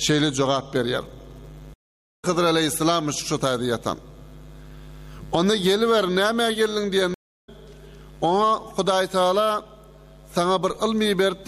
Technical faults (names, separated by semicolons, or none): stream reconnect